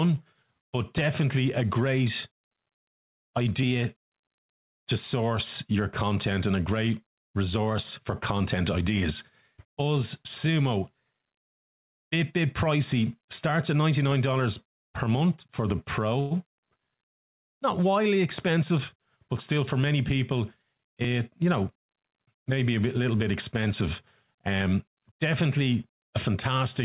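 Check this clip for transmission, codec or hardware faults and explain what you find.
Two faults show up in this speech clip, both on the receiving end of a narrowband call path that cuts everything above 4 kHz, which fits G.711.

From 16.2 to 16.33 s, right after "per month for the", there's a short call audio freeze. The likely cause is delayed packets draining the jitter buffer, so the receiver stretched the last sound into a fading buzz or hiss for about 107 ms. Nothing's lost; the audio just resumes late.

From 18.51 to 19.90 s, leading into "people it you know", there's a jitter buffer speed-up. The buffer was overfull, so the receiver kept snipping out pitch-period-sized slices, about a tenth of a second in total. Speech runs roughly 106% fast at unchanged pitch and sounds a bit hurried.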